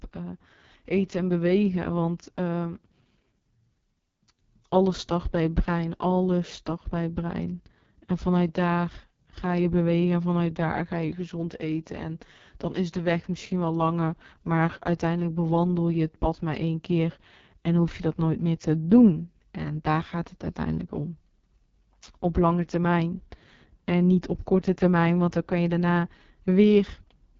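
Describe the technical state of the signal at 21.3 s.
At 21.3 s the speech sounds rough and raspy, with a gritty, buzzy edge and a dull top that stops at about 7.3 kHz. This is the AMR wideband (HD Voice) codec, present throughout the clip rather than only at this moment. AMR-WB models the voice with pulses driving a vocal tract filter and fills the top band with shaped noise. Damage this heavy points to its lowest mode, around 6.6 kbit/s.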